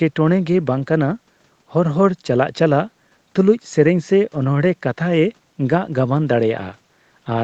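Nothing stood out on listening to this speech recording; the room's background noise sits well below the speech, and the call processing narrows the sound to about 8 kHz as expected.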